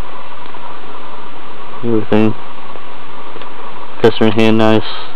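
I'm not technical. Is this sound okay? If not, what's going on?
No. Hard clipping occurs from 1.95 to 2.28 s and more harshly from 4.04 to 4.78 s. The loudest moments are chopped flat, giving a gritty fuzz that follows loudness rather than random clicks.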